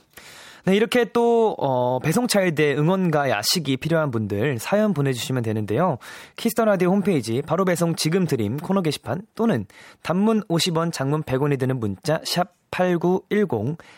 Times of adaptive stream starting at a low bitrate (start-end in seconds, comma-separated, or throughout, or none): none